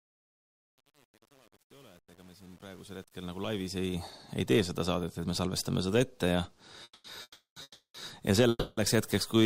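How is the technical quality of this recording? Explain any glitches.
There are two distinct problems: a gritty fade-in at the start and a cluster of stalls near the end.

From 0 to 4.1 s, as the sound fades in from the start, there's truncation distortion on the fade, worst up to about 3.77 s. The fade was computed without dither at low resolution, which fits an 8-bit stage. The quiet part turns into coarse steps, so it sounds grainy.

Then come four call audio freezes: 6.83–7.05 s, 7.22–7.57 s, 7.62–7.95 s and 8.49–8.78 s, each lasting between 0.21 and 0.34 s. Each one is a stretched, decaying buzz or hiss that drops to brief silence, from about 20 ms up to 190 ms, before the audio resumes exactly where it stopped. This is likely delayed packets draining the jitter buffer. Nothing is lost, but each freeze adds that much delay.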